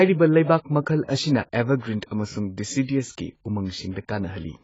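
From start to end the speech sounds dull and smeared, with nothing above about 7.7 kHz, and sibilants and sustained vowels carry a warbling, fizzy texture. The likely cause is heavy AAC compression. The encoder discards high bands and coarsely quantises what remains, which fits a very low bitrate of around 16 kbps. A plain low-pass filter would also remove the top end but would leave the rest clean. Here the surviving spectrum itself swirls and gurgles.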